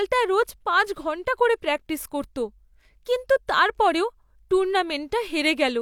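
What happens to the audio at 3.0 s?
Nothing goes wrong at 3.0 s; the speech passes through that moment intact, with no dropout, click, distortion or other fault to be heard.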